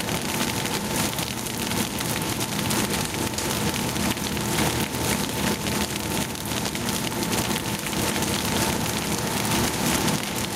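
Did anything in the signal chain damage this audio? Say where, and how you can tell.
Yes: gain pumping throughout, likely from input gain set too high with a fast limiter; the gain swings around 10 dB between loud sounds, unlike steady clipping.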